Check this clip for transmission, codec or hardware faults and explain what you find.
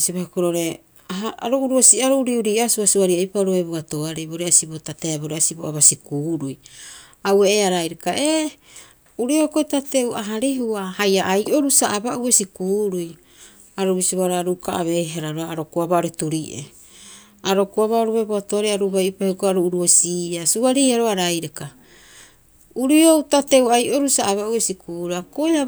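Two brief episodes of hard clipping turn up in the speech. A stage in the chain ran out of headroom, and the waveform peaks were sliced flat at its limit. The first comes at 1.84 to 1.92 s, driven about 4 dB past the ceiling. That squared-off top throws harmonics high up the spectrum, heard as a short harsh crackle. The second, at 19.90 to 19.95 s, overshoots by only about 1 dB and gives a fainter, briefer tick of grit.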